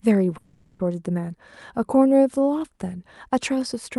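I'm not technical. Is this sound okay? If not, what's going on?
No. From 0.37 to 0.82 s the sound turns into a fading buzzy hiss, then picks up again with almost half a second missing. This is likely a long network dropout: the audio never arrived, and the receiver improvised filler instead.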